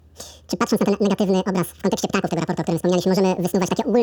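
From start to finish, the speech plays at double speed and a full octave high, which points to a wrong sample rate: audio recorded at 24 kHz is being played at 48 kHz with no conversion. On a spectrogram, formants and harmonics sit at twice their normal frequencies, and the waveform's syllables come compressed to half their length.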